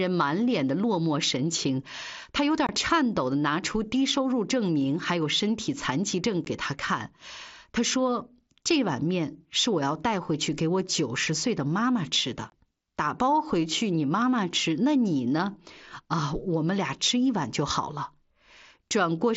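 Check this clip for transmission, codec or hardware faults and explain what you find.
The clip has one fault type: unconcealed Bluetooth headset packet loss. It occurs three times over the wideband mSBC headset link, whose light graininess on louder speech is audible.

At 2.67–2.69 s, 6.45 s and 12.50–12.52 s, roughly 15 to 22.5 ms of speech drops out. Lost headset-to-phone voice packets were replaced with silence or an idle pattern rather than concealed, leaving brief hard-edged holes.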